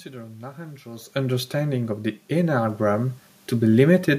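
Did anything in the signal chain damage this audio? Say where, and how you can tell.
Yes. In call processing, automatic gain rising occurs from 2.28 to 3.08 s, just after "understanding of the". The voice and the room noise swell together by about 4 dB over 0.8 s. The AGC judged the input too quiet and ramped its gain.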